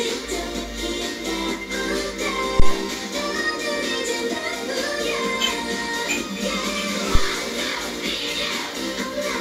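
At 2.60 s and again at 7.15 s, a phantom power thump: a supply switched on or off on a live input sends a voltage step through the coupling capacitors, giving a deep thump peaking near about -3 and -4 dBFS. Each shows as a tall low-frequency waveform spike decaying over roughly 40 ms, a dark band at the spectrogram's bottom.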